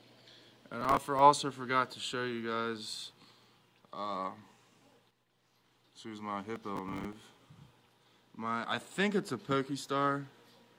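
Processor overload crackle appears from 0.81 to 1.19 s and again, longer, from 6.56 to 7.21 s. In both bursts the processor falls behind and misses a run of audio buffer deadlines. Each miss is filled with a stale scrap of earlier audio joined by hard edges, producing a gritty, tearing crackle over the sound. The tiny size of each repeat fits buffers of around 5 ms, with the second burst carrying roughly twice as many misses as the first.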